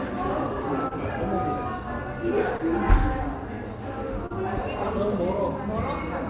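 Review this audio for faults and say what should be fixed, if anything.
Brief smears at 0.88–0.93 s, 2.57–2.73 s and 4.26–4.32 s are short concealed packet loss: 20–40 ms never arrived, so the decoder extended the preceding sound. Prevent it with a more stable network path, a deeper jitter buffer, or forward error correction to recover lost packets.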